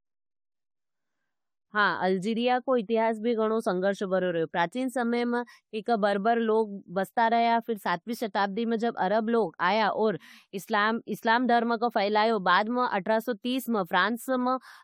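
From start to finish the speech carries a swirly, hollow smear with blurred consonant onsets, most likely generation loss from several passes through a lossy codec, consistent with AAC-LC around 64 kbit/s. A spectrogram shows scattered spectral holes and nothing above 19.9 kHz.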